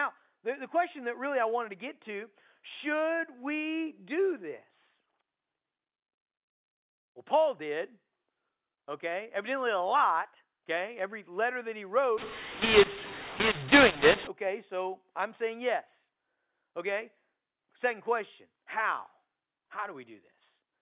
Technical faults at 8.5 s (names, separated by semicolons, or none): none